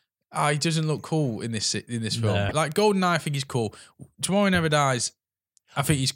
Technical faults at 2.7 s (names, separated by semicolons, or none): bit error spike